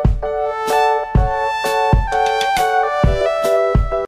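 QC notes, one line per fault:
3.18–3.22 s, damaged data in a compressed stream: a brief chirp or blip about 40 ms long, where corrupted bytes in the encoded stream make the decoder misread those frames, lose sync and hunt for the next valid frame header before playback settles again.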